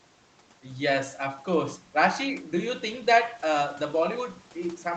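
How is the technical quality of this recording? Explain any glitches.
Nothing in this speech recording stood out as a glitch on listening, with its band-limited call-style sound reaching up to about 8 kHz.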